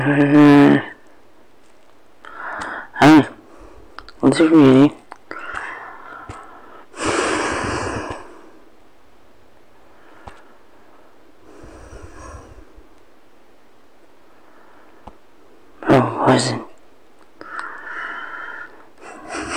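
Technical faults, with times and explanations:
0.20–0.75 s, 3.02–3.20 s, 4.25–4.86 s and 15.90–16.37 s, hard clipping. The signal overruns a stage's limit by about 8, 16, 8 and 11 dB, so peaks are sliced flat. The flattened tops add high harmonics, heard as harsh fuzz, harshest at 3.02 s.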